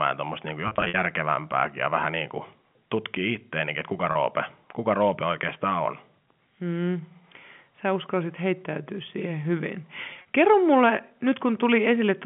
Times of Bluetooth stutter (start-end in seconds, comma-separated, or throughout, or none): none